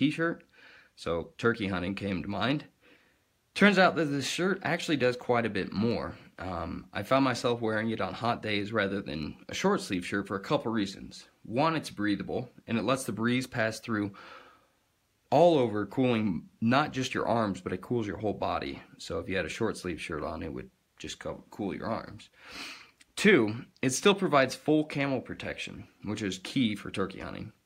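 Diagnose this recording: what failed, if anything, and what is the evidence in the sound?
Nothing stood out on listening that would point to a failure at any stage of the chain.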